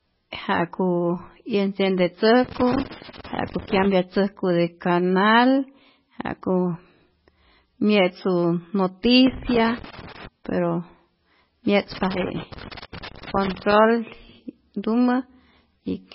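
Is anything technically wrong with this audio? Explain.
Yes. The speech carries three kinds of fault.

Heavy codec damage runs through the whole clip. Nothing is present above 5.6 kHz, and the sound is watery and swirly. The likely cause is MP3 compression at a very low bitrate, which fits about 16 kbps. Short of bits, the encoder drops weak frequency lines. Those lines switch on and off between frames, which gives the swirl. A fixed treble cut-off removes the top.

Loose connector crackle appears three times: 2.44 to 3.96 s, 9.26 to 10.27 s, and 11.92 to 13.72 s. Each burst is irregular crackle and scratching. A worn or dirty contact makes and breaks as it moves. That chops the signal, and any DC on the line adds pops.

Pre-echo occurs once, at 12.81 s, during the third crackle burst. A short hiss of about 14 ms comes just before a sharp attack, and the attack sounds smeared. The codec spreads quantisation noise across a whole block. 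When the onset lands late in a block, the noise meant for the loud part also fills the quiet moment before it.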